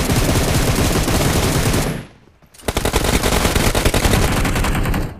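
From 2.86 to 4.22 s, the audio is shadowed by an identical, equally loud copy about a fifth of a second late. It starts and stops abruptly: a doubled audio track, likely from a second capture path.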